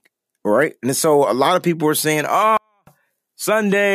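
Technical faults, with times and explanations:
2.57–2.87 s, 24-bit alignment error (too quiet): after "of people were saying", clean audio stored in a 32-bit word's low bytes reads about 48 dB down; waveform collapses near flat, spectrogram fades almost blank.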